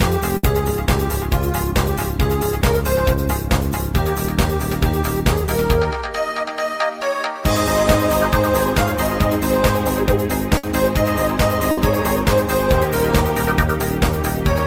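Burst of packet loss at 0.37, 10.57 and 11.71 s: each time about 60 ms is concealed, with the previous sound held and faded, then 60 ms skipped.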